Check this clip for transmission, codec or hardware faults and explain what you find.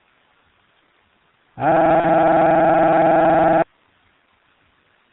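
Two faults are present: heavy G.723.1 codec damage across the whole clip, and one concealed packet loss near 2 s.

The G.723.1 codec damage runs throughout. The speech sounds muffled and hoarse, with smeared consonants. Nothing above 4 kHz survives. The codec models the voice in coarse 30 ms frames and updates that model slowly. The degradation is consistent with a stream of about 6.3 kbit/s.

A VoIP packet loss concealed by the speech codec occurs from 2.00 to 2.06 s. About 30 ms of audio went missing, which matches one lost frame. The decoder filled the gap by repeating its last pitch and filter at falling gain. This gives a brief stretched sound that fades. The speech stays weak or distorted for a moment afterwards.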